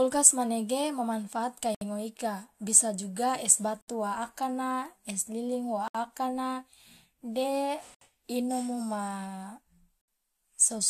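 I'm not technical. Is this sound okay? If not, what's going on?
No. The speech was encoded in separate chunks and stitched together without trimming the silent padding each chunk carries, causing a gap at a join of encoded pieces. About 67 milliseconds of silence cuts in every two seconds, at 1.75, 3.81, 5.88, 7.95 and 10.01 seconds.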